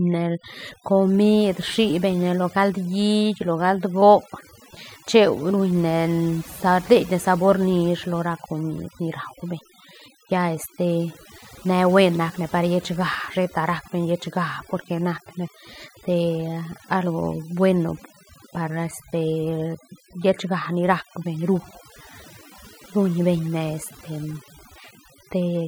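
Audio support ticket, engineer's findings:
Overdone noise removal, present throughout the clip. Background between phrases collapses to near silence with twinkling, chirpy specks; quiet consonants and word tails eroded. Probable component: noise reduction stage set far too aggressive on a noisy source. Mechanism: individual frequency bands falling near the noise estimate are pulled down or switched off frame by frame, taking low-level voice detail with them and leaving isolated surviving bins as the specks.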